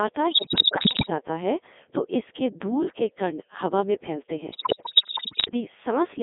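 The whole clip passes through a Codec 2 vocoder, heavily damaged. The sound fits the 3.2 kbit/s mode. Only pitch, voicing, energy and a spectral envelope survive. The decoder rebuilds speech from sine waves, so it sounds robotic and buzzy. The band runs from 250 Hz to 3.6 kHz.

Bit errors on digital voice radio strike twice. The first runs from 0.31 to 1.10 s and ends just before "जाता है तो इसके". The second runs from 4.52 to 5.51 s, right after "हवा में फैलते", and is worse. Flipped bits corrupt whole frames. The pitch, level and tone then jump into bleeps, warbles and gibberish.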